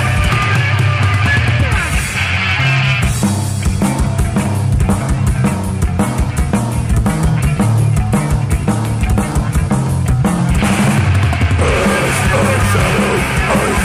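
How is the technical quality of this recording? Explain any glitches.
The recording is compromised by overload from start to finish. Hard clipping runs throughout: the signal was driven about 8 dB beyond what a stage could pass, so peaks were sliced flat, roughly one sample in fourteen. Those squared tops add high harmonics, heard as harsh fuzz on every loud moment.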